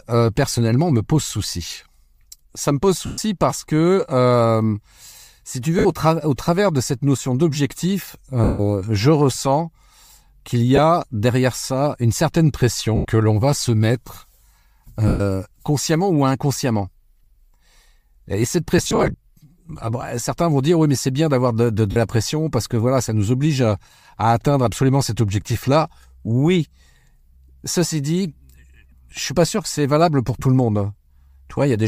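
Speech sent over a Bluetooth LE Audio link, likely coded with LC3 and showing only light codec damage, suffers lost LE Audio frames at 3.06, 5.79, 8.44, 10.76, 12.96, 15.08, 18.78 and 21.91 s. The LC3 decoder fills each gap by reusing the last spectrum with random signs, so the sound smears into noise for 20 to 150 ms and fades in the longer gaps. At 18.78 s, about 200 ms of losses are scattered over 360 ms in short runs.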